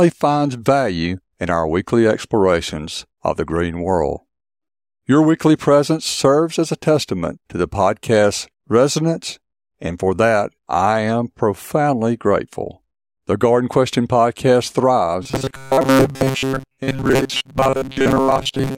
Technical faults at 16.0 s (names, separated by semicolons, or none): robotic sound from repeated short buffers